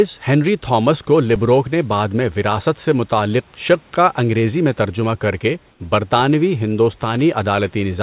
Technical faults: underrun with held sample; comfort noise in place of the background

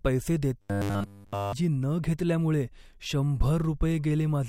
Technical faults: robotic sound from repeated short buffers

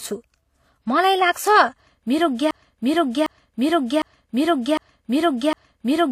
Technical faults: transcoding between lossy codecs; broken-record loop

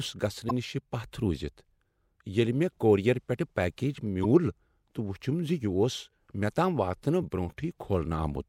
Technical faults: damaged data in a compressed stream

